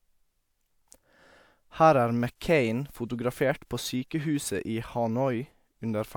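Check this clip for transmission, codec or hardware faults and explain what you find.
No faults found anywhere in the speech, and nothing heard points to a transmission, codec or hardware problem.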